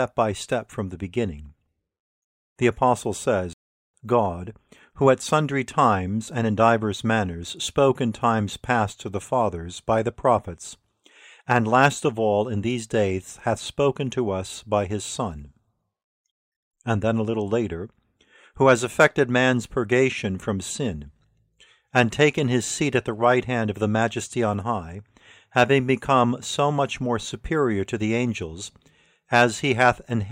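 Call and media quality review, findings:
Playback stall, 3.53–3.94 s: speech cuts to silence mid-flow for about 0.41 s, then resumes. Likely player-side buffer underrun or blocked output thread; device starved of samples until recovery. Check jitter-buffer depth and audio-thread scheduling.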